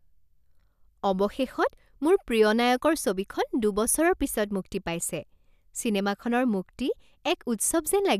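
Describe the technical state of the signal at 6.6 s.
At 6.6 s the speech signal is intact, with no audible fault at that point.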